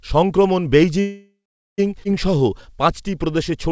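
From 1.00 to 1.80 s there is a call audio freeze. The last sound is stretched into a fading buzz or hiss, which gives way to about 0.44 s of silence before the speech resumes exactly where it stopped. About 0.78 s has been inserted into the timeline, but nothing is lost. This is most likely packets stalling in transit until the jitter buffer ran dry. Unlike a dropout that cuts material, the continuation picks up mid-sound, so the delay is pure added time.

At 2.04 to 2.07 s the playback skips ahead. Roughly half a second of speech is gone, and the two sides are butted together with only a tiny bridging fill of about 9 ms. There is no audible pause, which separates it from the freeze. Instead of waiting, the audio lurches forward, as happens when a stretch is discarded while later packets are already queued. The result is an abrupt splice rather than a gap.

From 2.31 s to 3.70 s a jitter buffer slow-down sets in. 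The receiver repeats single pitch periods to rebuild its reserve, adding about 110 ms and running the speech at about 92% speed. Pitch stays put, so this is not tape-style slowing. Syllables sound drawn out. The whole clip passes through a G.722 call path with nothing above 8 kHz.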